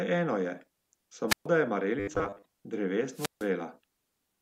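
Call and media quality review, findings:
Hiss swell, then near-silent holes of about 130 ms (1.28–1.46 s) and 150 ms (3.13–3.49 s), speech resuming. Wireless microphone squelch dropout: RF fade, receiver squelch mutes output.

Rigid metallic 100 Hz buzz over speech, 2.00–2.43 s. Likely robotic sound from repeated short buffers: a 10 ms segment looped while most real audio is skipped.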